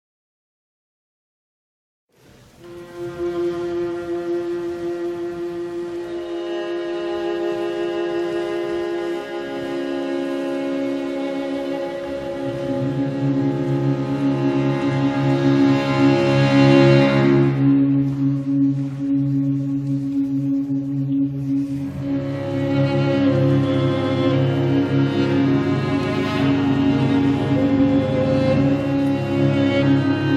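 No technical fault can be heard anywhere in the recording. There is nothing that calls for a timestamp or an explanation.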